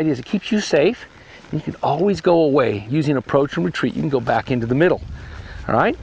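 No technical faults can be heard in this clip.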